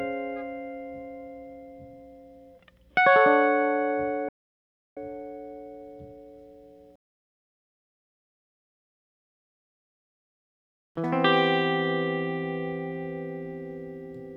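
At 4.29 s the music cuts out abruptly. It returns at 4.97 s, partway through the passage. This is an audio dropout to silence lasting about 0.68 s. The gap is silent, with no background or room sound underneath. The input signal was likely lost for that moment, through a brief disconnection or mute, while recording carried on writing silence. Whatever played during those 0.68 s is missing.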